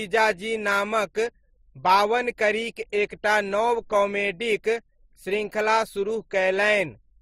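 From start to finish the speech has nothing above about 15.7 kHz, and two kinds of compression grit heard together. This is likely transcoding between lossy codecs, where the first encoder's artefacts were re-encoded by a second, which fits an MP3 at around 41 kbit/s followed by Opus at around 32 kbit/s, with the lower cut-off persisting.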